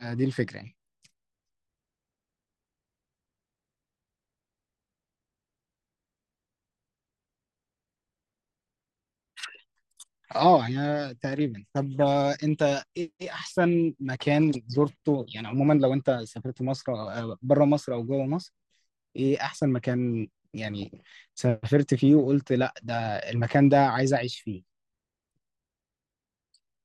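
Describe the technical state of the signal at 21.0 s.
At 21.0 s there is DAB burbling from 20.82 to 21.13 s. Bit errors slipping past error correction corrupt individual sub-bands for single frames, giving short blips of noise and level jumps in single sub-bands, unlike steady codec gurgle. Underneath, throughout, the audio sounds dull and granular with plainly audible gurgling, likely from MP2 compression at a low rate around 80 kbps, with upper bands switched off.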